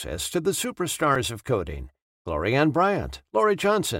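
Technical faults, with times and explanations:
1.15 s, repeated buffer: a piece of speech only about 1.45 ms long, which fits a 64-sample buffer, plays three extra times with a hard join at each repeat, costing a few milliseconds of audio. Because the repeats fall about 1.45 ms apart, the result is a brief buzz near 690 Hz rather than the single click of a dropout.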